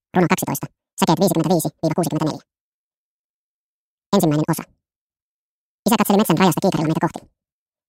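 The audio runs at double speed and an octave high throughout, a wrong sample rate fault. This fits 24 kHz material played back at 48 kHz without conversion.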